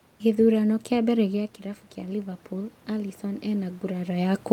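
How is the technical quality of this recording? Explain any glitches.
The recording has one glitch, an automatic gain rise. From 1.19 to 4.26 s, after the input level dropped by about 9 dB as the talker moved away around 1 s, the automatic gain control slowly added about 5 dB. Speech and room noise swell together, and a waveform shows the whole envelope, noise floor included, climbing gradually.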